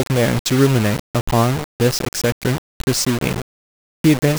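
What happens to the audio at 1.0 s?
Low bit depth without dither is present at 1.0 s, as it is throughout the speech. The grainy distortion shifts with the signal, and quiet stretches sputter or drop out. The likely cause is rounding to about 4 bits, leaving error only about 10 dB below the signal.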